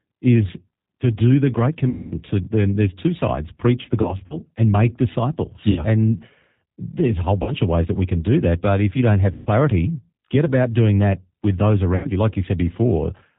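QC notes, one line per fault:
Throughout, G.729 codec: speech is squeezed to 8 kbit/s and rebuilt from a vocal tract filter, a pitch predictor and a few pulses per 10 ms frame, so nothing above 4 kHz passes and the voice sounds rough and synthetic, with plainly audible codec damage.
1.89–2.20 s, 4.02–4.36 s, 5.71–5.85 s, 7.43–7.53 s, 9.32–9.49 s, 11.96–12.09 s, VoIP packet loss concealed by the speech codec: packets went missing (about 220, 80, 60, 40, 140 and 80 ms of audio; the 80 ms near 4 s scattered over 280 ms in gaps up to 40 ms), and the decoder extended its last pitch and filter at falling gain. The sound smears into a fading buzzy tone or coloured noise, and stays weak or distorted for a moment after packets return.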